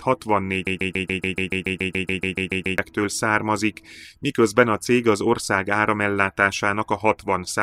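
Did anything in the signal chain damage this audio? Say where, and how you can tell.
Yes. A broken-record loop runs from 0.67 to 2.78 s: a 142 ms fragment of speech repeats exactly, back to back, about 15 times. The likely cause is a stalled player or stream buffer re-sending its last fragment, and the speech due in that span is lost.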